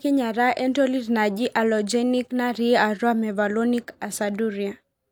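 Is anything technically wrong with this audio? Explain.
No, the speech signal shows no audible technical fault at any point.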